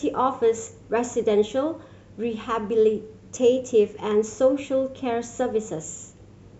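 No audible faults anywhere in the speech recording; nothing to flag.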